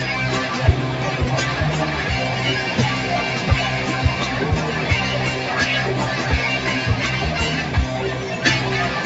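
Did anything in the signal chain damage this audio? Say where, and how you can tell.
No, nothing in the chain damaged this audio. All that can be heard of the call path is that the top end stops at about 8 kHz, which fits a wideband call codec working as intended.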